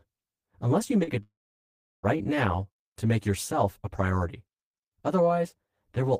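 From the start, the speech sounds hollow and phasey, with a thin, filtered colour. This is channel delay (comb filtering): one channel trails the other by about 10 ms, and summing them to mono cancels evenly spaced bands, starting near 50 Hz and recurring every 100 Hz or so.

At 1.03 s a brief smear interrupts the speech until 1.10 s. This is short concealed packet loss: 40 ms of audio never arrived, and the receiver covered 38 ms of it by extending the preceding sound before blending back into the real signal.

At 1.23 s the sound stretches into a fading buzz, then falls to near-silence for about 0.71 s before speech resumes at 2.18 s with material missing. This is likely a long network dropout: about 0.8 s failed to arrive, the concealment faded out, and the gap was never recovered.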